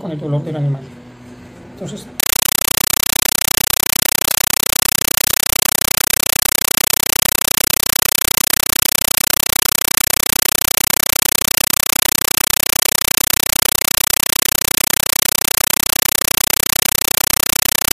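From 2.20 s to the end, a compressed stream played as audio replaces the sound: loud static chattering in 8 ms bursts 31.25 times a second, a steady rhythm that sets it apart from random noise, pointing to undecoded AC-3.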